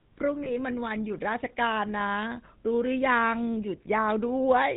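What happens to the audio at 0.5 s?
Lost GSM frames, from 0.44 to 0.56 s: the decoder repeats the last good frame's settings, which fits a single lost 20 ms frame and leaves a brief rough, metallic ring. Under this, the GSM full-rate codec adds its buzzy, gravelly roughness and cuts everything above 4 kHz.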